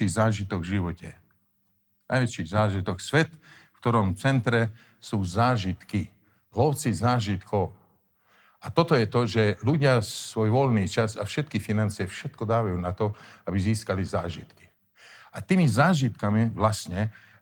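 No technical faults can be heard anywhere in the recording. The speech runs continuously, with nothing breaking into the signal at any point.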